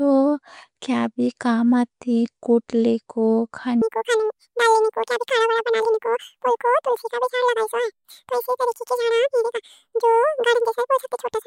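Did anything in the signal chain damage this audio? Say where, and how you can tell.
Yes. From 3.82 s to the end, the speech suddenly runs at twice the speed and sits a full octave higher, 12 semitones up, with that chipmunk rush you can't miss. It's a wrong sample rate fault at the playback stage: the samples go out at double the rate they were captured at, with no conversion, so pitch and tempo jump together. That fits material recorded around 22 kHz being clocked out at 44.1 kHz.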